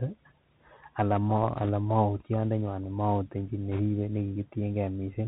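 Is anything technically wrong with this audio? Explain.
Yes. The whole clip carries the Bluetooth CVSD headset codec, which fits a 64 kbps headset link. CVSD encodes each sample as a single up-or-down bit with an adapting step, so everything above 4 kHz is gone. Loud high sounds outrun the step and distort, s sounds turn scratchy, and a granular hiss sits under the speech. That hiss, rather than the smeary swirl of a frame-based codec, is what marks it as CVSD.

Bit errors on a Bluetooth voice link appear at 1.57 to 1.70 s at a light rate of around a percent or two, and again, heavier at a few percent, from 3.72 to 3.80 s. Each flipped bit only nudges the signal one step, sized to the speech level, and the error dies away fast, so a rushing crackle rises over the speech instead of sharp clicks or the gaps of dropped packets.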